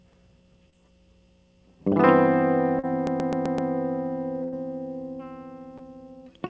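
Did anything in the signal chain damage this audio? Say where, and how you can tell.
Yes. Two short concealed packet losses come from the network stage, at 0.70 to 0.75 s and 2.79 to 2.85 s. About 20 ms and 40 ms of music failed to reach the decoder in time, and the receiver extended the preceding sound to bridge each gap before crossfading back. Each is a brief smear or wobble, not a silence. The first also drops about 11 ms of real audio. Unlike the later burst, neither lasts long enough to decay into a held tone.

The system hang loop at 3.07 to 3.71 s is a driver or buffer fault, not a network one. The host stalled while the output hardware kept cycling its ring buffer, so one 128 ms slice repeats exactly five times. That produces a machine-gun stutter at about 7.8 Hz, consistent with a 2048-sample buffer. Essentially no audio is skipped afterward. Concealment never repeats material identically like this; it synthesises from pitch or noise and fades.

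A burst of packet loss follows at 4.43 to 4.54 s, again in the network. About 100 ms went missing and roughly 90 ms was filled by continuing the last sound while turning it down, so it becomes a held, decaying buzz or hiss. The music then resumes further on with the intervening passage gone. That missing span separates it from the hang loop, and its length separates it from the short concealments. The G.722 call path, with nothing above 8 kHz, carries all of this.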